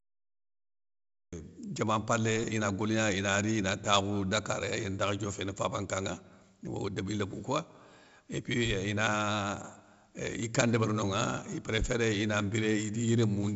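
The first 1.33 s is digital silence, then speech enters mid-sound with no attack or fade: a cut-off start, where recording or streaming began late. Throughout, 4-bit ADPCM compression leaves heavy, level-tracking gritty hiss and smeared attacks; nothing above 7.7 kHz, which fits roughly 64 kbps at a 16 kHz rate.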